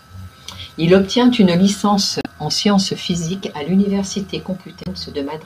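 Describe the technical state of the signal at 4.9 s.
Just before that point, from 4.81 to 4.87 s, there is damaged data in a compressed stream. The decoder misreads the corrupted frames and loses sync until it finds the next frame header, producing a brief chirp, squawk, click or short hole.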